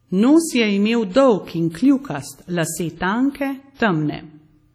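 A low-bitrate transform codec, likely WMA compression, runs through the whole speech clip, with heavy damage that fits a rate around 32 kbps. Coarse quantisation over long blocks leaves a ringing, washy texture and a hiss that swells and fades with the speech, and nothing is present above 19.6 kHz. At 3.75 to 3.80 s comes pre-echo: a sharp attack lands late in a coding block, so noise sized for the loud onset spreads back across about 51 ms of quieter audio before it, heard as a brief hiss leading into a softened, smeared attack.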